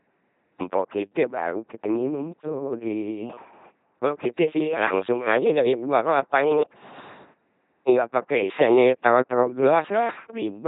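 Speech run through an LPC-10 vocoder for the whole clip, and it shows: every moment is rebuilt from a pulse train or noise driving a ten-pole filter, so you get a buzzy robot sound, with heavy damage at 2.4 kbit/s and nothing above 3.8 kHz.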